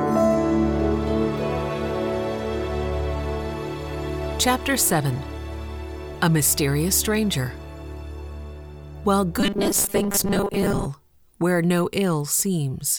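From 9.40 to 10.87 s the sound turns into a rigid, metallic buzz fixed at 200 Hz: robotic sound from repeated short buffers. Audio likely arrived too seldom, so roughly half the time was filled by replaying the last 5 ms.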